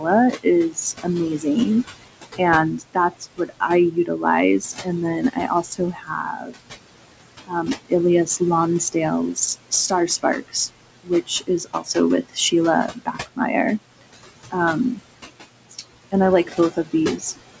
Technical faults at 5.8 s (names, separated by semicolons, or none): noise suppressor artifacts; speech cut by the noise suppressor